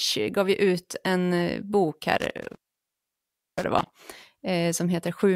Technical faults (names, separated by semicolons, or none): intermittent contact